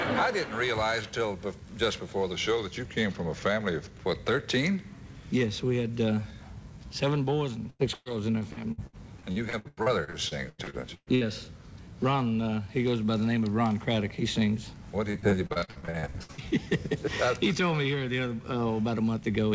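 From 2.32 to 4.01 s the audio slows by about 5.4% and drops roughly 95 cents, nearly a semitone, likely a drift correction step resampling to rebalance a buffer. Repeated packet loss (robotic sound) follows at 7.70–11.24 s and 15.11–16.41 s. Frequent dropouts, up to 123 ms and 59 ms long, are patched by extending prior audio, giving choppy playback with pieces missing, with about 31% and 42% concealed.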